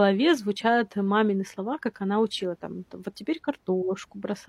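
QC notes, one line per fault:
3.25–3.29 s, overlap between stream segments: right after "учила там там вот" there's a small skip where roughly 35 ms of the speech goes missing. Two segments claimed the same stretch of time, so the player trimmed the supposed duplicate even though that audio only existed once. The waveform jumps across the gap. The segments are about 4 s long.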